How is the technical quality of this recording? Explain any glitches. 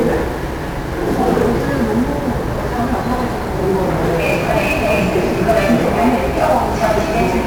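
Technical quality is poor: heavy 1-bit DFPWM compression damages the whole recording from start to finish.

1-bit DFPWM compression, throughout: each sample is reduced to a single up-or-down bit that pushes an adaptive level toward the waveform, so the signal is only ever approximated by small steps. The leftover error forms dense broadband quantisation noise, with a character that fits a rate of about 48 kbps. The audio sounds fuzzy and crackly, and its upper detail is dulled or replaced by hiss.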